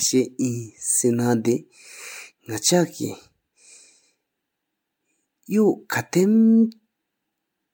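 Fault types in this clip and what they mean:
Generation loss: throughout, the speech sounds swirly, hollow and smeared, consonant attacks blur, and nothing reaches above 19.9 kHz. The likely cause is about four rounds of MP3 re-encoding at what sounds like 96 kbit/s, each re-quantising on a shifted frame grid, so noise and spectral holes build up.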